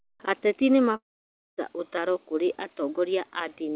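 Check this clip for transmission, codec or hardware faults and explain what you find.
One fault stands out, heard through a telephone-band call path with nothing above 4 kHz, which fits G.711. From 0.96 to 1.59 s there is a long network dropout. Audio stops arriving, the receiver stretches the last sound into a fading buzz or hiss, and then about 0.57 s of near-silence follows. Sound resumes with roughly 0.62 s lost. A short packet-loss glitch would be smoothed over, but this gap goes fully quiet, pointing to a likely network interruption.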